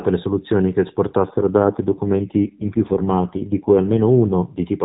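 From 1.24 s, right after "le soluzioni che", until 4.59 s, an AMR rate drop makes the speech rougher and buzzier, which fits a fall from AMR-NB's 12.2 kbps to 4.75 kbps. Unlike packet loss or band-limiting, there is no gap and the narrowband ceiling stays unchanged.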